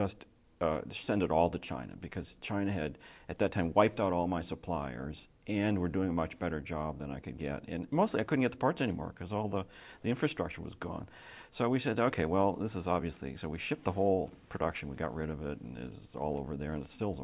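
No technical faults can be heard in this recording.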